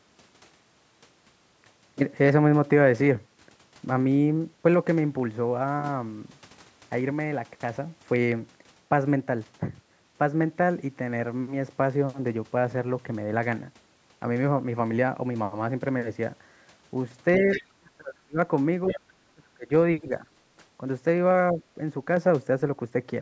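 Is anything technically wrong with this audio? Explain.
Yes. From about 17.4 s to 21.6 s the speech suffers two related faults, both likely caused by an echo canceller struggling while both sides of the call were talking.

Speech suppressed in double talk occurs at 17.38–17.49 s, 17.72–18.38 s, 18.90–19.00 s, 19.18–19.70 s, 20.01–20.26 s and 21.52–21.60 s. The canceller could not tell the local talker from loudspeaker echo and pulled the level down. The short events are shallow dips of about 5 to 10 dB. The ones at 17.72 s and 19.18 s drop by about 35 dB, so the speech nearly vanishes for half a second or more. A network dropout would cut sharply to silence. These dips instead track the other side's activity.

The other side's voice leaking through appears at 17.51–17.63 s and 18.87–19.00 s. A faint second voice, about 10 dB below the talker, comes through in brief scraps. It is residual loudspeaker echo the canceller failed to subtract. 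Room reverberation would smear the talker's own speech, but this is a different voice that falls around the suppression dips. The call's microphone processing, which rolls off the lowest bass and carries nothing above 8 kHz, is normal here.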